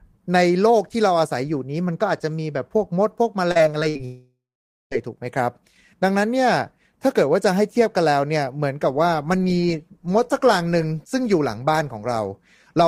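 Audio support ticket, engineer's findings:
Repeated packet loss (robotic sound), 3.51–4.01 s. Choppy speech. Five short holes, longest 58 ms, each patched by repeating the preceding sound, so about a third of this half-second is concealment. Component: jitter buffer / packet loss concealment. Spectrogram: frozen, smeared harmonic blocks broken by vertical seams at each splice. Waveform: repeated near-identical cycles between breaks.

Network dropout, 4.05–4.93 s, likely a long outage upstream. Symptom: the last sound stretched into a fading buzz, then about 0.5 s of silence. Speech resumes at 4.93 s with the intervening stretch gone. Component: receiver concealment running past its limit. Spectrogram: a flat, decaying band with no formant movement, then an empty region. Waveform: amplitude tapering to a flat line before an abrupt restart.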